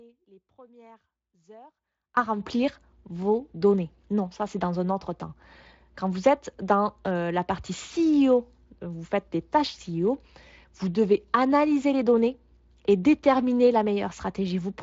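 The signal feed was likely lost before the clip began while the path behind it stayed live. This audio dropout to a faint residue leaves only faint sound, about 30 dB down, from 0.0 to 2.17 s, before speech returns abruptly at "remplir vos données".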